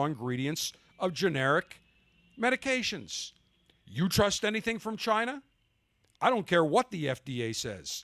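No technical faults can be heard in this speech recording.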